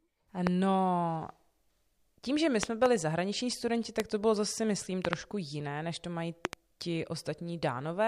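Speech, with five loud pops sitting on top of it while the talking carries on underneath. Single pops come at 0.47–0.49 s and at 4.00–4.02 s, right after "zahraniční studenti". Double pops come at 2.63–2.88 s, 5.05–5.15 s and 6.45–6.55 s. Each stands around 20 dB above the speech. The cause is likely a sudden voltage step from a plug, switch, static discharge or driver glitch.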